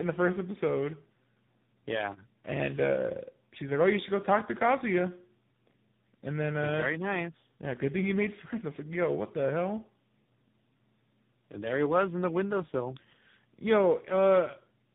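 Throughout, the speech shows tandem speech coding: it was decoded and re-encoded at each network border, likely across three successive speech coders ending in a low-rate AMR-style codec, each working on the last one's damage. Nothing sits above 3.8 kHz, and the speech sounds muffled, rough and warbly.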